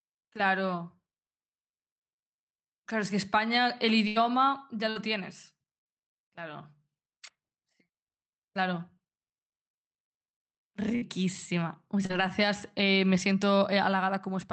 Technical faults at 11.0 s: burst of packet loss

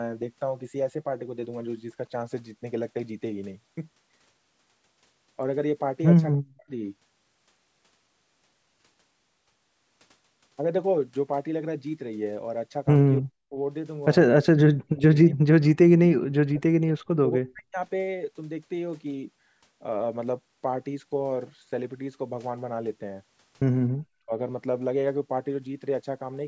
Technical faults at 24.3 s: speech suppressed in double talk

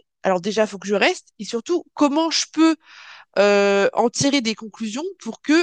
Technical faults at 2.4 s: none

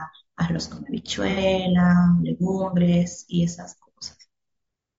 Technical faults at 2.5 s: low-delay AAC compression

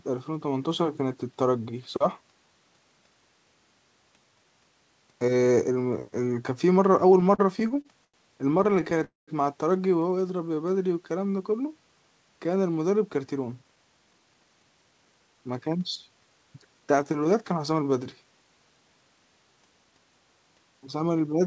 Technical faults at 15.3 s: jitter buffer speed-up

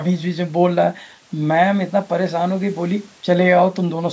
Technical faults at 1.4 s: none

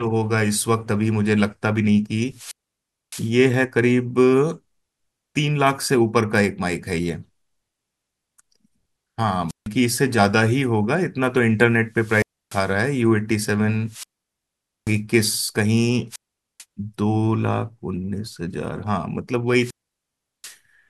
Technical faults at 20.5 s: wireless microphone squelch dropout

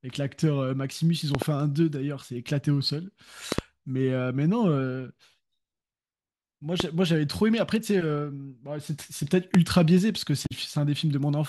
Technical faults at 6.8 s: loud pop

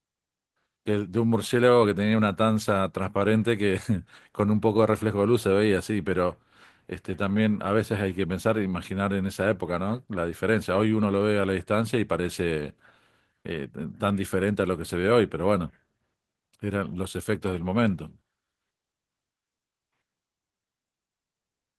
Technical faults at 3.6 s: clock drift between sender and receiver; repeated timing corrections

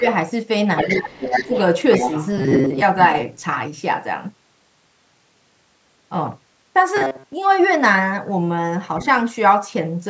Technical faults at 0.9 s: other side's voice leaking through; speech suppressed in double talk

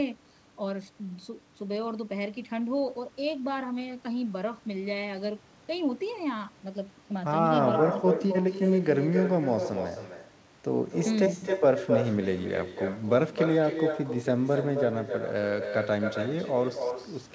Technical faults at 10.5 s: echo with no canceller

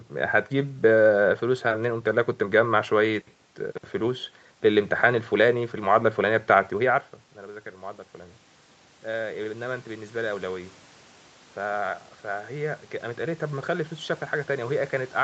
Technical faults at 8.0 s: none

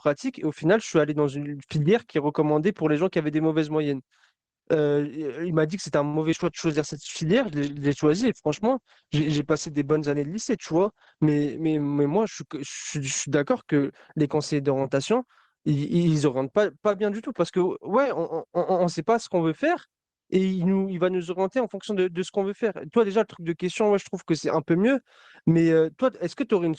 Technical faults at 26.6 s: none

